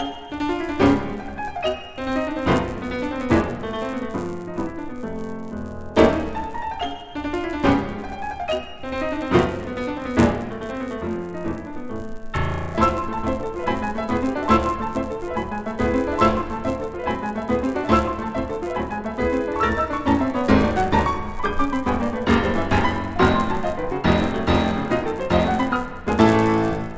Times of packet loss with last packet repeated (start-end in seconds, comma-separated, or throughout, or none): none